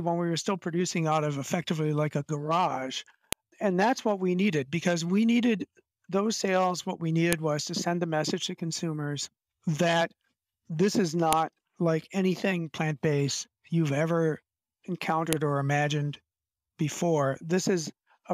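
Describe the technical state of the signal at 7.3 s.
A sharp, loud click snaps through at 7.33 s: a file header played as audio, where a joined WAV piece's header bytes were decoded as samples.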